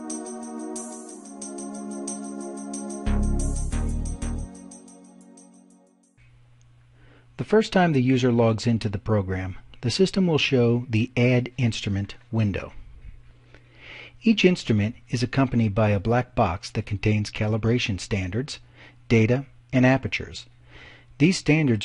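A single sample, or very close to it, was likely lost from the stream at 1.17 s, a case of dropped samples. With that value missing, the waveform steps straight from one point to a later one, opening a gap far shorter than a millisecond. Nothing audible is removed, but the abrupt discontinuity sounds as one sharp click in the audio and would show as a thin vertical line running across the spectrum at that moment.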